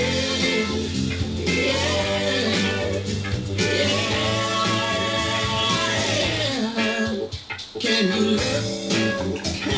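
No technical faults can be heard anywhere in the clip. It has come through a call path, and nothing reaches above 8 kHz, which fits a wideband codec such as G.722.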